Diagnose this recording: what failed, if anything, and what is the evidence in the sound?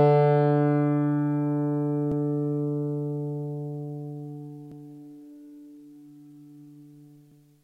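Overlapping chunks at the buffer or block-processing stage: at 2.12 s, 4.72 s and 7.32 s, a 100 ms stretch of sound plays twice, heard as a brief stutter. Each 2.5 s chunk starts before the previous one ends. The waveform shows a duplicated segment with a discontinuity, and the spectrogram a thin vertical seam.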